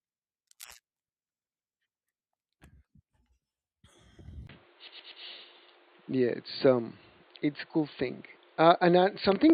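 At 4.47 s, after a 20 ms gap, the sound turns dull and boxy, with nothing above 4.6 kHz, a level shift of around 5 dB and new noise about 35 dB down. This is likely an input switched to a poorer device. On a spectrogram the top band ends abruptly. From 4.87 to 5.23 s, repeated frames replay a 120 ms block three extra times, adding 360 ms of stutter. The waveform shows identical segments.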